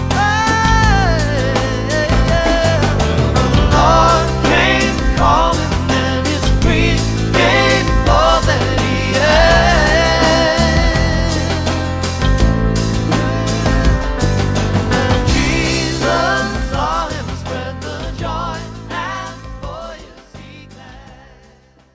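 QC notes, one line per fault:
No faults to log for this clip.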